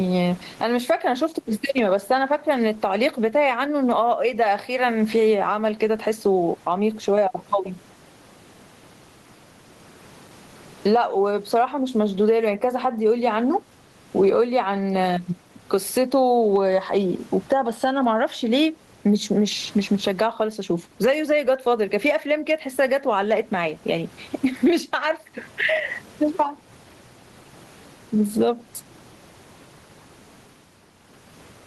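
Gain pumping runs through the whole speech clip, with the gain swinging by about 20 dB. The room noise sits about 42 dB below the speech. The likely cause is gain set far too high, with a fast limiter pulling it down.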